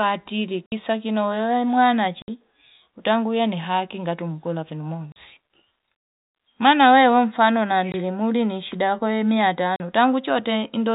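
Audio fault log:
0.66–0.72 s, 2.22–2.28 s, 5.12–5.16 s, 7.92–7.94 s, 9.76–9.80 s: packet loss filled with silence. Gaps of 60, 60, 40, 20 and 40 ms cut the speech dead, all multiples of 20 ms, which fits 20 ms packets. The abrupt drop to silence and back leaves hard edges.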